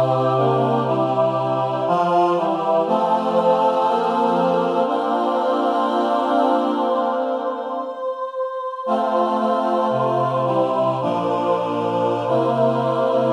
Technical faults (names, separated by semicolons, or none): none